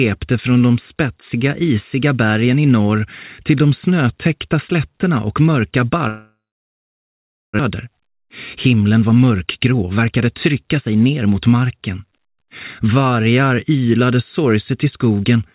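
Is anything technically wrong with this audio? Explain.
Yes. From 6.08 s to 7.61 s the sound turns into a fading buzz and then about 1.15 s of near silence before resuming with roughly a second of material gone. This is likely a long network dropout: packets stopped arriving, the receiver extended the last sound, then gave up. It also left the delay about half a second higher.

From 7.75 s to 11.10 s a jitter buffer speed-up drains that backlog. The receiver repeatedly cut short pitch-period segments, removing around half a second in total. The audio plays at about 113% speed with unchanged pitch and sounds noticeably hurried.

Throughout, nothing is present above 4 kHz, which fits a narrowband telephone codec on the call path.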